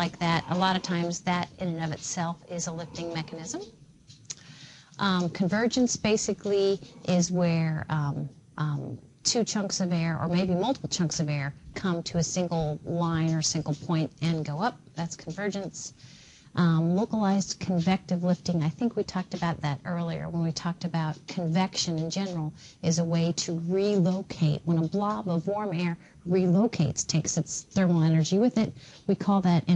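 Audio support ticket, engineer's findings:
Channel delay (comb filtering), 18.49 to 20.09 s. Top end goes dull, loss of air; no obvious hollowness lower down. Probable component: stereo-to-mono summing stage, one channel late by roughly one sample. First cancellation notch sits near 20 kHz, so the comb hits only the extreme highs.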